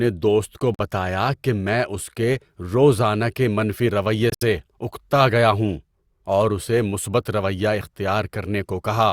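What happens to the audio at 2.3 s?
Nothing goes wrong at 2.3 s; the speech runs through that moment intact, with no dropout, click or distortion.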